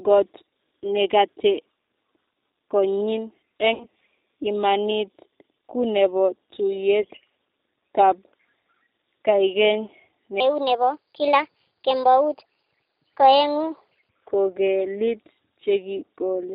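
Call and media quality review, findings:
G.729 codec, whole clip: speech band-limited below 4 kHz, slightly rough and synthetic. Classic 8 kbit/s vocal-tract-plus-pulses rebuild; the damage is plainly audible.

VoIP packet loss concealed by the speech codec, 3.74–3.87 s and 7.01–7.06 s: about 60 ms and 30 ms gone. The decoder stretches the last frame into a buzzy tone or coloured noise that fades, and it stays weak briefly afterwards.

Section at the wrong speed, 10.40–14.09 s: speech 1.3x fast, pitch up about five semitones, sounding hurried and high. Likely a player or editor running on the wrong clock.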